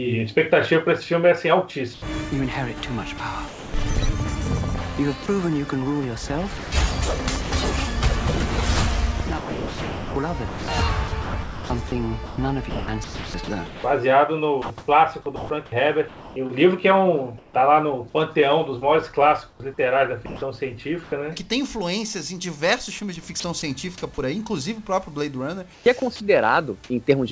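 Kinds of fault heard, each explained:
Sound chopped by the voice detector: At 1.94 to 3.74 s, 5.26 to 7.52 s, 9.18 to 17.54 s, 23.40 to 23.62 s and 25.74 to 26.20 s, the sound repeatedly breaks into holes filled with smooth synthetic noise. The gaps total about 360 ms, 280 ms, 3.1 s, 60 ms and 180 ms. The likely cause is a sender-side detector switching transmission off and on, with the receiver substituting comfort noise each time.
Sound dropped by the voice detector: At 19.50 to 19.60 s, about 70 ms of sound vanishes and steady noise stands in for roughly 100 ms before the audio resumes. This is likely a detector that judged that quiet moment to be background and stopped sending until it triggered again. The receiver played generated noise in the gap, so the lost sound is not recovered.
Comfort noise in place of the background: From 19.50 to 21.12 s, the real background gives way in places, about 340 ms in total, to a smoother synthetic noise with its own tone and level. 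This likely comes from discontinuous transmission. During pauses the sender goes silent, and the receiver fills them with noise roughly matched to the background. The audio stays band-limited below 8 kHz throughout, as expected from the G.722 call path.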